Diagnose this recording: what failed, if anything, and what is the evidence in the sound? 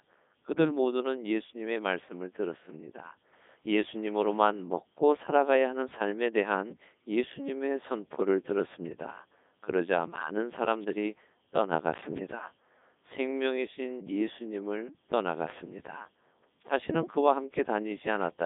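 At the codec, Codec 2 vocoding rebuilt the speech from sine waves: robotic, buzzy throughout, nothing above 3.8 kHz, fitting its 3.2 kbit/s mode.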